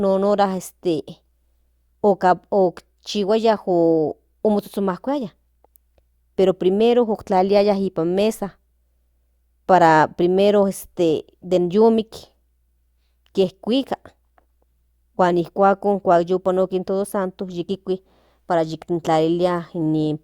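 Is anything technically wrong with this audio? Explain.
No, nothing is technically wrong with this audio.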